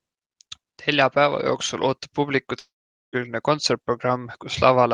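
From 2.59 to 3.16 s the speech cuts out. The last sound gets stretched into a short fading buzz, then there's roughly 0.45 s of near silence before the speech picks up again with about 0.54 s simply gone. That's most likely a long network dropout, with the receiver's concealment papering over the start of the gap and then giving up. You can hear the call codec's top end stop around 12 kHz, which fits Opus at a modest bitrate.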